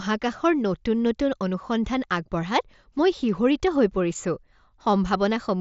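Nothing stood out on listening to this speech recording, which comes through a Bluetooth mSBC headset link with its band ending near 7.7 kHz.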